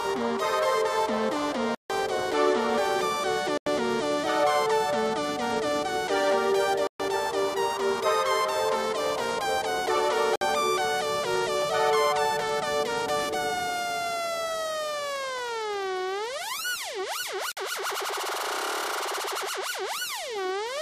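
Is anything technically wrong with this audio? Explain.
Yes. The sound drops out five times, in a pattern that points to a Bluetooth stall. The gaps start at 1.75 s (150 ms), 3.58 s (88 ms), 6.87 s (126 ms), 10.36 s (55 ms) and 17.52 s (51 ms). Each time, the audio cuts cleanly to silence and then resumes. The likely cause is radio interference delaying packets, so the headphones' buffer empties and playback halts until the retransmitted data arrives.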